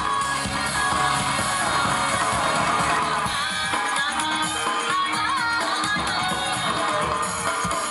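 Doubled audio track, 0.75 to 2.99 s: an equally loud, dry copy trails about 0.7 s behind, likely from a slower second capture or a misaligned edit.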